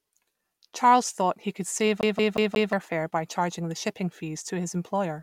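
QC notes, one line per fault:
2.01–2.73 s, CD stuck on one turn: just after "he could save", the speech catches on a single 0.18 s fragment and repeats it four times, each repeat cut off by a brief mute where the pickup jumps back, until the sound moves on into "fare by charging the". The fast, metronome-even stutter comes from a scratch throwing the laser back one track at the same point on each revolution, so the identical slice plays again on every turn.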